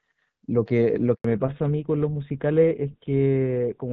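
At 1.14 s the sound drops out in a handover gap lasting 100 ms, until 1.24 s. The call was moved between networks, and no speech frames were delivered while the link switched over, so the audio fades within a few tens of milliseconds and stays silent. Unlike ordinary packet loss, there is no concealment, no smeared or repeated fragment, just a single clean hole, and the sound that resumes on the other side has a different character.

From 1.24 s to the end, a fallback to narrowband follows directly on that gap. Before it, the wideband HD Voice path carries speech with fairly light coding damage, consistent with AMR-WB around 12.65 kbit/s. After it, nothing remains above 4 kHz, so sibilants and airiness vanish and the speech turns duller and rougher. What separates this from a simple low-pass filter is the added coarse, buzzy codec texture, which points to an older GSM full-rate codec rather than mere band-limiting.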